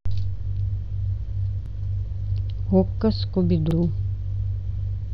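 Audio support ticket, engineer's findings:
Overlapping chunks in the speech. Short stutter at 1.66 s and again at 3.71 s. Each join replays about 50 ms of audio. Joins are 2 s apart. Probable component: chunked processing or transport stage. Each chunk starts before the previous one ends.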